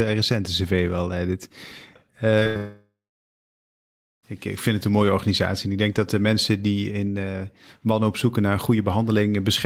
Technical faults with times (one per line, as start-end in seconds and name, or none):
2.39-2.47 short concealed packet loss
2.47-2.57 burst of packet loss
2.57-4.25 long network dropout